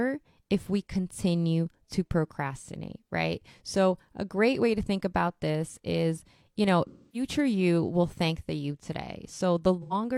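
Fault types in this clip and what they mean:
AAC frame loss with concealment: lost frames are rebuilt from the previous spectrum, so gaps after "this is you know" and near 9.82 s sound smeared, not silent like dropouts.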